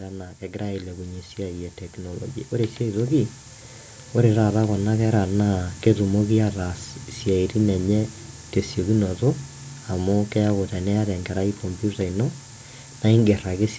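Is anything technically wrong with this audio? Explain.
Yes. The speech has two faults. Low bit depth with noise shaping runs throughout. The signal uses only about 5 bits, and the rounding error is pushed upward. The result is a thin, steady hiss that climbs toward the top of the band and is nearly as loud as the speech.

Automatic gain rising occurs twice, from 0.39 to 1.33 s and from 1.95 to 3.34 s. Each time the gain control treats the input as too quiet and lifts it by about 5 dB. Speech and background swell together. The band stops at 8 kHz, as the call microphone processing intends.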